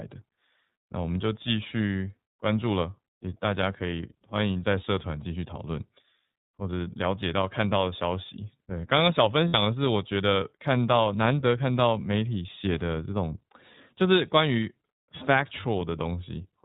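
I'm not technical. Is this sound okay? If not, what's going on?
No. The whole recording has passed through the iLBC codec, a compression method built for internet phone calls. It keeps only the lower part of the sound and drops everything above about 4 kHz. That is why the speech sounds narrow, like a phone line. The damage is plainly audible. The voice has a slightly rough, synthetic edge, because the codec rebuilds the speech from a simplified model rather than keeping it exactly.

There is also a moment of lost iLBC frames at about 9.48 to 9.55 seconds. A short chunk of data, about 60 ms, never arrived. The decoder filled the hole by repeating the last bit of voice mixed with a little noise. You hear it as a brief held, slightly buzzy vowel. Because this codec handles each chunk on its own, the voice comes back cleanly right after.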